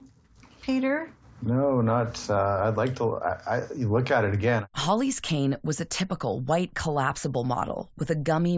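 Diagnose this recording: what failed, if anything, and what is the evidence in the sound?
No audible faults detected.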